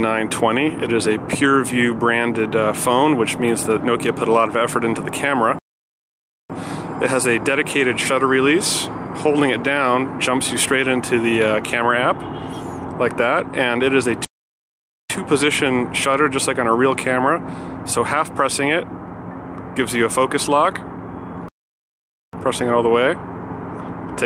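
The audio has three playback stalls, where the sound cuts off mid-flow and the output stays silent before resuming: 5.59 to 6.50 s (about 0.91 s), 14.25 to 15.10 s (0.85 s) and 21.48 to 22.33 s (0.85 s). These are likely the player running out of data or its thread being blocked. Unlike a brief dropout of a few milliseconds or a natural pause, each gap interrupts the sound abruptly and lasts nearly a second.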